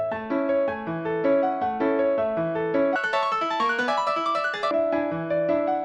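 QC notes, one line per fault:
2.96 to 4.71 s, audio read two samples at a time (double speed): the sound suddenly races at twice its normal rate and jumps a full octave, 12 semitones, higher. The player is consuming pairs of samples as if each pair were a single frame. This fits a mono or narrower-sample stream being taken as two channels or wider samples. Every second of material passes in half a second.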